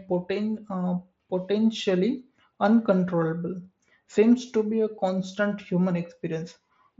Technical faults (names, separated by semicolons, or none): none